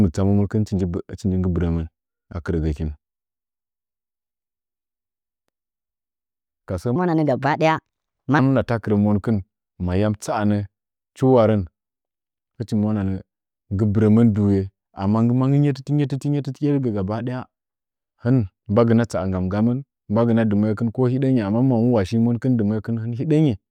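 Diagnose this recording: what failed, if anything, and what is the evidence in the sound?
Between 6.96 and 8.39 s the speech jumps into a section at the wrong speed: it runs 1.31 times too fast, so the voice turns hurried and rises by about five semitones before dropping back to normal. The likely cause is a clock mismatch at the playback or editing stage, where that stretch was read out at a higher rate than it was recorded. On a spectrogram the harmonics and formant bands step upward and the syllables compress in time. The waveform looks tighter.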